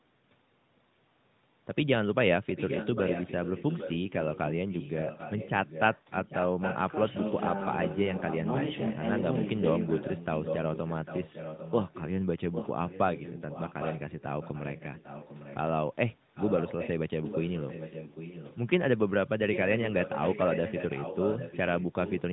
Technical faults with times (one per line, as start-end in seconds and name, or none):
2.48-9.22 echo leak
9.82-15.57 echo leak
16.35-16.91 echo leak
17.22-18.55 echo leak
19.52-22.22 echo leak